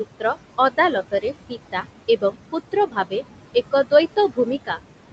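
Noise suppressor artifacts run through the whole clip. The suppressor pulls the room noise down by about 17 dB between phrases, then lets it rise back under the speech, so the background pumps.

At 1.49 to 1.85 s, there's speech cut by the noise suppressor. It mistakes some quieter speech for noise and drops it by up to about 13 dB. Only about a tenth of a second is hit, and those sounds come across swallowed and faint.

The same thing happens again from 2.72 to 3.13 s, this time over roughly a fifth of a second. Parts of the speech get dragged down with the background by up to about 13 dB, leaving them sounding clipped and weak.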